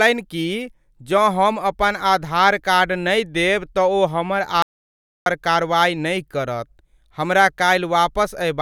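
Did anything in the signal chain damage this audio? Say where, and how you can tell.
Yes. An audio dropout to silence runs from 4.62 to 5.26 s, losing about 0.64 s of speech. The speech cuts off mid-flow and returns abruptly. The gap is silent with no room tone. The cause is likely a lost input link, with the recorder writing silence.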